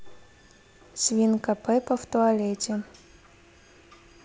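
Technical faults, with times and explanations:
No technical faults are present in this speech clip. The G.722 wideband telephone coding at 64 kbit/s carries the sound up to about 7 kHz, with at most a faint trace of its coding in the upper band.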